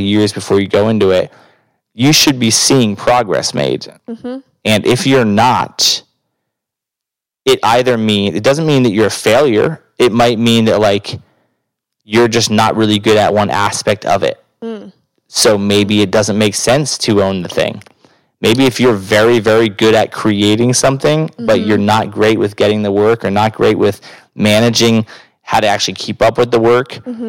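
A speech recording with hard clipping throughout: the level is driven about 16 dB past what a stage can pass, so a small but steady share of peaks are sheared flat, giving harsh fuzz on every loud syllable, unlike the rounder, gentler thickening of soft saturation.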